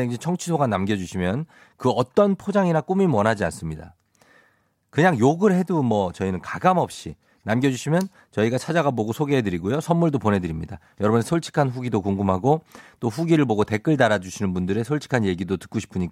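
No technical faults can be heard anywhere in the speech recording.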